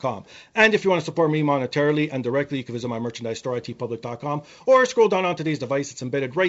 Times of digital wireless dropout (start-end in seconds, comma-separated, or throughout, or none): none